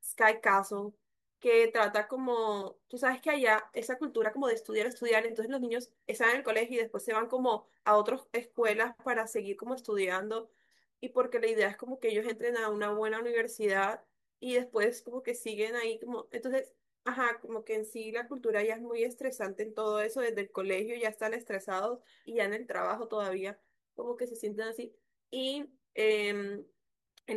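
No technical faults can be heard anywhere in this speech recording. There is nothing here that calls for a timestamp or an explanation.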